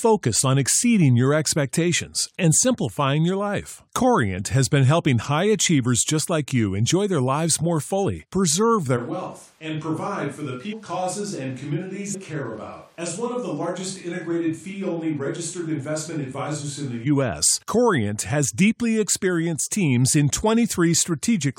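A switch to a distant microphone runs from 8.99 to 17.05 s in this speech recording: the sound turns roomy and hollow with thinner bass, drops by about 10 dB, and room noise rises to about 30 dB below the speech, likely because the close microphone's signal was lost. Compressed frames are skipped at 10.72 s and 12.13 to 12.15 s. The audio jumps ahead by roughly 300 ms and 200 ms, which fits whole frames of about 23 ms going missing.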